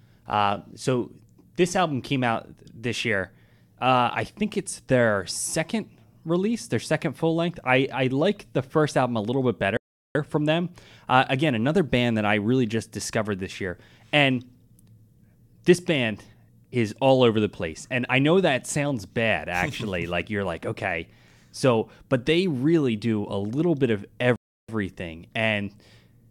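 At 9.77 s, right after "album a little bit", the speech cuts to silence for about 380 ms and resumes at 10.15 s with "from them"; at 24.36 s, after "a little bit of", it drops out again for about 330 ms. Both are playback stalls, likely the player running dry of data or being blocked.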